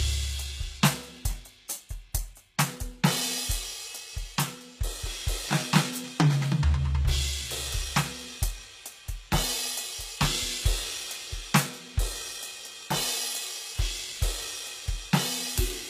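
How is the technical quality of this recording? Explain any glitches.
The quality is poor. Codec damage is plainly audible throughout the music. It sounds like HE-AAC compression, likely at a very low bitrate around 20 kbps. Only the lower spectrum is properly coded. The treble is synthesised from copied lower bands. It sounds unnatural, with harmonics that don't match. Nothing reaches above 14.9 kHz.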